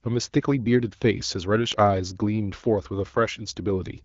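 No faults to report: the speech runs over an AMR wideband (HD Voice) link at 12.65 kbit/s, with the light coding texture that rate leaves and a band that ends near 7.5 kHz.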